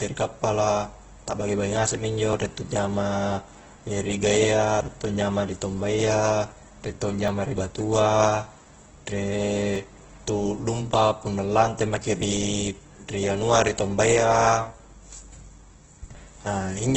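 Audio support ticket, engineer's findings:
Grainy, rough speech throughout, nothing above 8.3 kHz; likely Opus compression in CELT mode at a low bitrate near 12 kbps. Band-filling noise rather than MP3-style swirl.

Audio missing between chunks: short skips of about 30 ms at 2.33, 4.81 (just before "riek to anjama ri"), 7.28 (after "riek to"), 9.76 and 12.23 s (after "punna lante maki"). Spaced about every 2.5 s, so likely chunk boundaries, not random dropouts.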